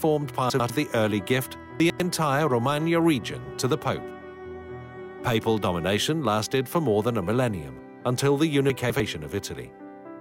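At 0.5 to 0.7 s and again at 1.8 to 2.0 s, a 100 ms chunk plays one slot late, swapping with its neighbour. At 8.7 to 9.0 s a chunk arrives two slots late. Each time, these chunks out of order produce a brief jumbled stutter. Unlike a dropout or skip, no sound goes missing and no silence appears. The pieces are all there, just briefly reshuffled.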